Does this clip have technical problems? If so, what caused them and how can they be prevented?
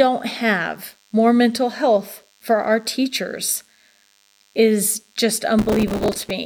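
Yes. A DECT cordless phone or base station close to the recording chain sends a radio burst every 10 ms, and the audio circuitry rectifies it. The result is DECT cordless phone buzz: a thin 100 Hz buzz rich in harmonics, about 40 dB below the speech, present throughout. Keeping DECT handsets and bases well away from microphones, cables and interfaces prevents it.

From 5.59 to 6.30 s, just after "is just", the processor could not finish its audio buffers on time. Dozens of deadlines were missed, which points to buffers of only a few milliseconds. Each miss repeated stale audio with hard edges, producing processor overload crackle, a gritty tearing over the speech. Using larger buffers or reducing CPU load while recording prevents it.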